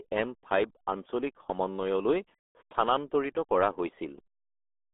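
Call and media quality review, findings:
RealAudio 14.4 codec damage, whole clip. Speech muffled and gargly, heavy codec artefacts. Nothing above about 3.8 kHz; usable band roughly 250 Hz to 3.5 kHz. Probable component: RealAudio 1 (14.4) encoder in the media path. Mechanism: very low-rate coding, consistent with an 8 kbit/s dial-up-era codec, strips high frequencies and coarsely models the speech, leaving a smeared, bubbling texture.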